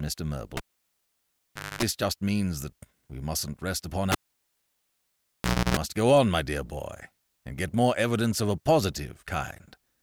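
At 0.57 s a live cable is pulled and plugged in. A pop, 1.2 s near-silence, then 0.25 s of 50 Hz buzz as the tip touches. Speech returns at "just means that we". At 4.12 s it recurs after "we mustn't rest upon": 1.6 s gone, 0.3 s of 60 Hz buzz, back at "go on my dear".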